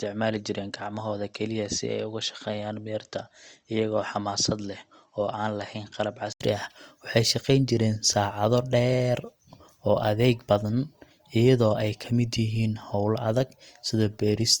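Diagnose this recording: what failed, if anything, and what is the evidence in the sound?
Input switched to a poorer device, from 0.0 to 6.41 s: for the first six seconds the speech has nothing above 8 kHz, sits roughly 5 dB quieter, and carries its own faint noise floor some 50 dB down. At 6.41 s an 80 ms gap breaks the audio and full bandwidth returns. The stage is most likely input routing at the driver level, with the system capturing from a narrower, lower-quality microphone path before moving back to the intended device.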